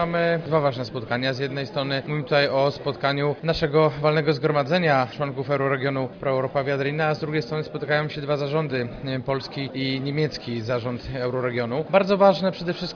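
No technical faults can be heard anywhere in this audio.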